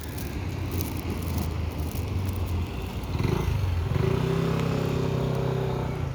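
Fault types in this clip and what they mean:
Loud pop: a brief voltage spike added on top of the sound, likely from a plug, switch, static discharge or driver glitch. Two single pops occur, at 2.27 to 2.29 s and 4.60 to 4.62 s, each about 20 ms long, the first a few decibels above the surrounding sound and the second roughly 10 dB above it. Unlike a dropout click, nothing is lost; the sound continues unbroken beneath each pop.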